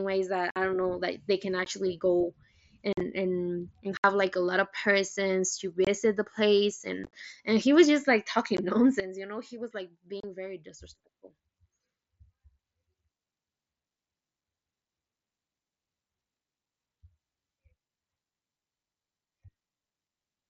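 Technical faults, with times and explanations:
0.51–0.56 s, 1.65 s, 2.93–3.01 s, 3.97–4.04 s, 5.85–5.87 s, 7.04–7.13 s, 8.57 s, 10.20–10.24 s, unconcealed Bluetooth headset packet loss: headset audio drops out with hard, abrupt edges. The first comes after "ways that" and before "don't know like they", lasting about 52 ms. The one at 1.65 s follows "know like they can". The one at 5.85 s falls between "lot of persons to" and "the place". Gaps at 2.93 s and 7.04 s are broken into scattered short holes. Missing packets were replaced with silence or an idle pattern rather than patched over.
9.0 s to end, sudden gain jump: sound and background noise drop together by about 12 dB in one step and stay down, likely a digital gain change applied without a ramp.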